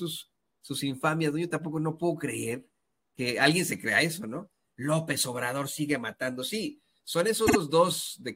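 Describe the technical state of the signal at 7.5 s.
At 7.5 s there are repeated frames from 7.46 to 7.56 s. A 52 ms block, which fits two compressed frames, plays twice more, stuttering and adding 104.5 ms.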